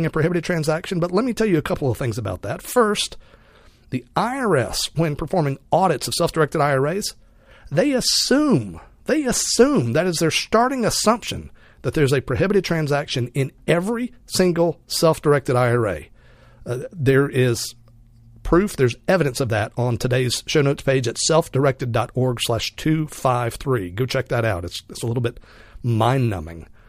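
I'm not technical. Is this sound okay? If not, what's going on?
Yes, nothing wrong here.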